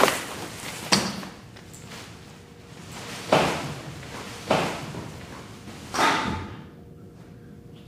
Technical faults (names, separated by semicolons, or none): doubled audio track